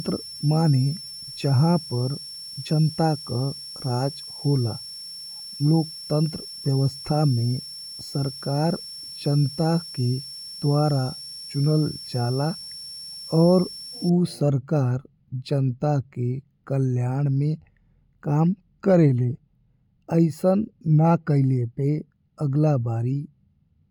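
From 0.0 to 14.09 s, a switching supply whistle sits under the speech. A power supply's converter is running in an audible burst mode or beating with another one. The thin, high tone wavers between 5.40 and 5.45 kHz, about 15 dB below the speech. It stops just before "सरकार जनता के कल्याण".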